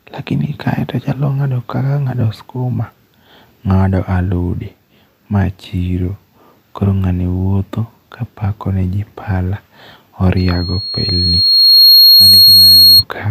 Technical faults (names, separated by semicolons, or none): loudspeaker feedback squeal